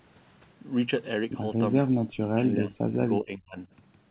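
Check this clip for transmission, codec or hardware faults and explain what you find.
One fault stands out, in the speech between 2.10 and 3.58 s. The narrow, telephone-like band topping out near 4 kHz fits a G.711-style call codec.

From 2.10 to 3.58 s the talker drops sharply, up to roughly 35 dB, over about a second and a half. This is likely speech suppressed in double talk: the echo canceller could not separate the talker from the overlapping far-end echo and attenuated both.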